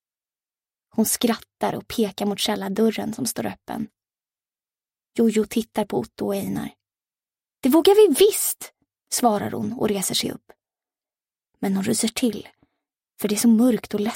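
A single sharp click at 12.2 s is the only fault in this audio. It is most likely dropped samples: roughly one sample, a tiny fraction of a millisecond, went missing, so the waveform jumps straight to a later value and leaves a thin vertical line across the spectrum. No sound is audibly removed, which separates it from a dropout, where a stretch of silence or a gap can be heard. Being one isolated tick, it is also unlike crackle, which repeats.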